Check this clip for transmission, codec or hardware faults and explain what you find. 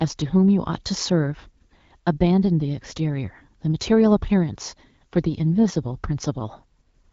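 Nothing stood out on listening to this speech.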